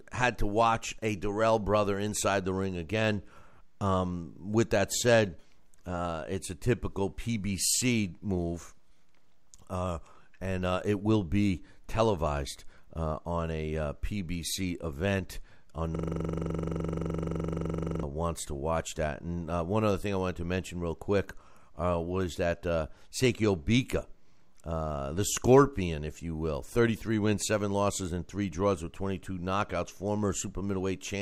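From 15.95 s to 18.03 s a system hang loop takes over. The driver stalled while the hardware kept replaying one 42.7 ms slice of the speech, which fits a 2048-sample buffer. Repeating at 23.4 Hz, it sounds like a rapid, rattling stutter.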